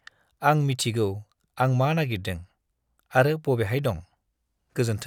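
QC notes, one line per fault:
Nothing to flag here; this speech clip came through with no faults heard anywhere.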